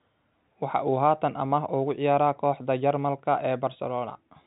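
Nothing in this speech stood out on listening, and its telephone-band sound, with nothing above about 3.8 kHz, is what G.711 coding normally gives.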